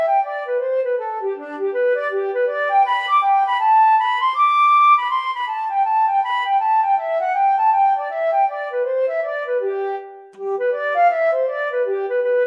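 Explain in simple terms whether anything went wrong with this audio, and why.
Nothing went wrong here: no dropouts, clicks, distortion or level jumps turn up anywhere in the recording.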